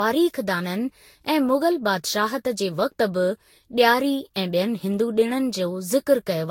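Throughout, the speech has likely passed through a lossy codec about seven times, which fits Vorbis near 64 kbit/s, with each pass requantising on a shifted frame grid. This generation loss sounds swirly, smeared and hollow, with blurred onsets and nothing above 16.6 kHz.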